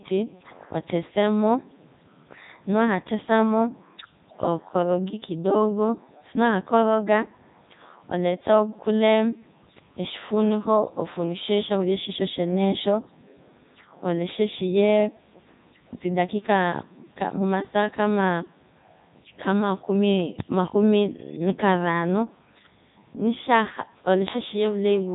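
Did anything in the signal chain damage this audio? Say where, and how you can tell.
Yes. The damage sits at the codec stage and runs through the whole speech clip: this is the Codec 2 vocoder, and the damage is heavy. The speech has a robotic, buzzy quality, and nothing is present above 3.8 kHz. Instead of preserving the waveform, the decoder rebuilds the voice from sine waves driven by pitch, voicing, energy and a spectral envelope. It runs in its highest mode, 3.2 kbit/s.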